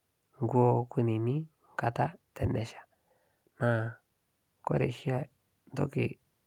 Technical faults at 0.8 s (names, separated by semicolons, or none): none